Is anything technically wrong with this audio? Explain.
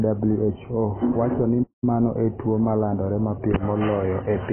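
Yes, two faults are audible in this speech clip.

Throughout, the sound is dull and smeared, with nothing above about 3.1 kHz and a warbling, fizzy texture on sibilants and held vowels. This is heavy AAC compression, likely AAC-LC at a very low bitrate, around 14 kbps. At that rate the encoder drops the top band and coarsely quantises what remains, leaving spectral holes. A plain low-pass filter would also remove the top band, but it would not add the warble and fizz.

From 1.63 s to 1.84 s the audio goes silent in mid-flow for roughly 190 ms and then resumes. This is a playback stall, likely caused by the player running short of data or its thread being blocked. A stall differs from a brief dropout or packet-loss click because the gap is long enough to hear as a pause and it is clean silence rather than a glitch.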